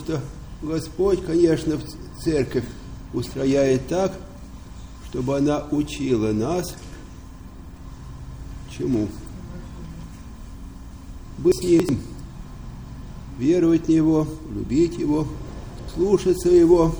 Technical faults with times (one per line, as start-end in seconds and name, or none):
9.85-10.03 chunks out of order
11.52-11.89 chunks out of order
15.51-15.88 chunks out of order